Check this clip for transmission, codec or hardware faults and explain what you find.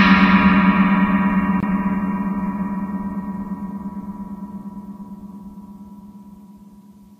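One fault is present. From 1.60 to 1.63 s there is a gap at a join of encoded pieces: separately encoded segments were spliced untrimmed, leaving encoder delay and padding. This opens a 24 ms gap with smeared edges before the sound resumes where it stopped.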